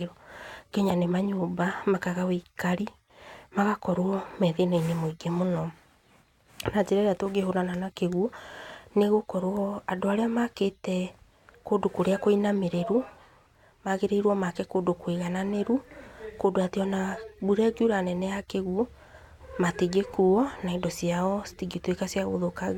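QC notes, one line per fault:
No faults found on this speech track.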